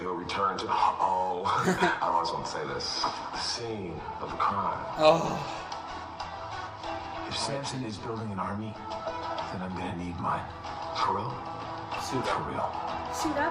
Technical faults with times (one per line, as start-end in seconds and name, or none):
none